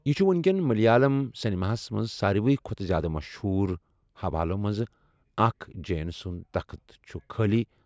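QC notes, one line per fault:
No faults heard in this speech clip.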